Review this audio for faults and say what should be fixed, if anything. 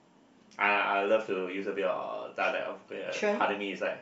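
Nothing stood out on listening to this speech recording, so there is nothing here to fix.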